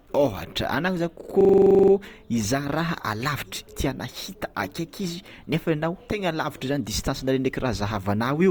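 From 1.41 to 1.92 s the speech locks into a system hang loop: the playback stalled while the hardware kept replaying one 42.7 ms chunk, which fits a 2048-sample buffer, giving a rapid 23.4 Hz stutter. The waveform shows identical repeating blocks, and the spectrogram shows matching slices stamped side by side.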